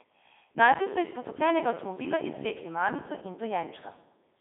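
Speech run through a Codec 2 vocoder the whole way: robotic, buzzy resynthesis from sine waves, fitting the 3.2 kbit/s mode, squeezed into roughly 250 Hz to 3.7 kHz, nothing above 3.8 kHz.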